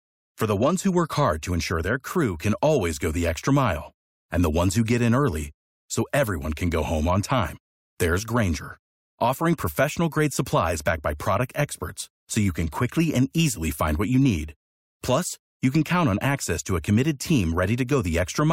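No technical faults are audible anywhere in the speech recording.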